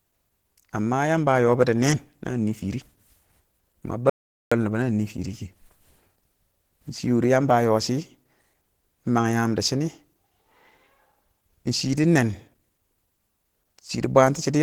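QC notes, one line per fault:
Throughout, Opus compression: the speech has a grainy, hoarse and rough edge, and the codec damage is plainly audible. It's likely down to a low-rate Opus encode, with the texture fitting something around 16 kbps. At that rate the encoder falls back on its hybrid speech mode and fills starved bands with folded or noise-like content rather than leaving gaps. The top end still reaches about 20.2 kHz.
4.10 to 4.52 s, audio dropout to silence: the sound cuts out abruptly and the gap is dead silence, with no room tone at all, for about 0.42 s before the speech resumes mid-flow. Whatever was said in that stretch is simply gone. That points to the input being lost for a moment while the recorder kept writing silence, most likely a brief disconnect or link failure.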